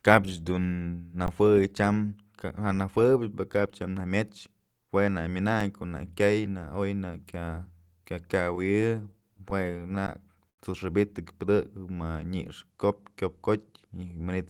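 At 1.26 s and 5.60 s an underrun with held sample flattens the waveform. The output buffer ran dry, the converter froze on its last value, and audio was lost. The first gap lasts 16 ms and the second about 1.3 ms.

From 8.55 to 10.60 s repeated stalls (stutter) make the sound drag. Late packets emptied the jitter buffer fourteen times, and the receiver stretched the preceding sound to fill about 11% of the span, the longest wait being 86 ms. Nothing is missing. A third held-sample underrun of about 13 ms at 10.07 s falls within the stutter.

From 13.72 to 14.37 s a jitter buffer speed-up plays the audio at 112% speed without a pitch change. Short pitch-period slices, roughly a tenth of a second in total, were cut to shrink the backlog, so this stretch sounds hurried.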